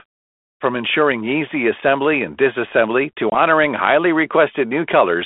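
A speech clip carried over a G.726 ADPCM line at 32 kbit/s, with the band limited to roughly 250 Hz to 3.5 kHz and light codec damage. It has one instance of packet loss on an ADPCM call, from 3.30 to 3.39 s, right after "assembly and disassembly to". About 20 ms of audio, a couple of packets' worth, drops out as a hard-edged silent gap. Because the decoder's adaptive predictor and step size keep running without the missing data, they no longer match the sender's state. The sound resumes with a brief disturbance and settles within some tens of milliseconds.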